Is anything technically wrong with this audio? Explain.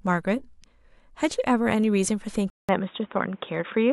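Yes. At 2.5 s the sound drops out for 187 ms, then returns narrower and duller, with nothing above 3.8 kHz and a new noise floor roughly 35 dB down. The level stays about the same. That's likely an input switched to a poorer device, such as a headset's call profile.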